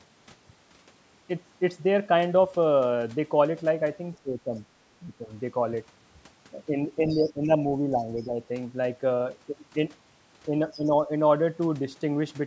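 At 4.23 to 4.58 s the speech dips by roughly 15 dB, and again at 5.02 to 5.29 s by a milder 5 dB or so. This is speech suppressed in double talk, likely an echo canceller ducking the near talker while the far side spoke. It differs from a network dropout because the level sinks and thins in pieces rather than cutting to silence with a click or gap. A longer stretch follows from 7.01 to 8.4 s, with about a second in total pulled down by roughly 10 dB.

Inside that stretch, at 7.08 to 7.32 s and again briefly at 8.2 s, the other side's voice leaks through, faint, about 25 dB and then about 35 dB under the talker. The same thing happens at 10.71 to 10.8 s, about 25 dB down, which is likely residual loudspeaker echo the canceller failed to remove. Unlike crosstalk from another line, these scraps arrive around the times when the near speech is being suppressed, here once more at 10.75 to 11.1 s by roughly 10 dB.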